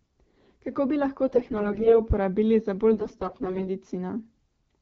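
From 1.28 to 2.01 s, right after "bi lahko", and again from 2.92 to 3.70 s, after "uporabili za", the speech turns hoarse, scratchy and gargly while keeping its rough pitch and loudness. These are AMR bit errors. A noisy link flipped a large share, something like one bit in seven, of the less protected bits in each frame. The excitation pulses landed in the wrong places and the fine pitch, gain and spectral values came out wrong. The lightly coded wideband sound around these bursts fits AMR-WB at 12.65 kbit/s.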